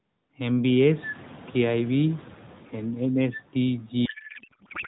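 From 4.06 s to the end, the speech collapses into garbled noise and warble that barely tracks it, a codec payload misread. The sound points to AMR frames packed octet-aligned but decoded as bandwidth-efficient, so every field lands in the wrong place. What separates this from packet loss is that nothing drops out or goes silent: frames keep arriving at full rate, each decoding into confident nonsense that persists rather than recovering.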